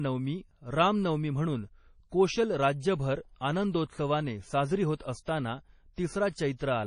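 A low-bitrate encode, likely MP3 compression at around 32 kbps, starves the speech of bits throughout. Everything above 10.5 kHz is gone, and dropped weak frequency lines leave a watery, swirling texture.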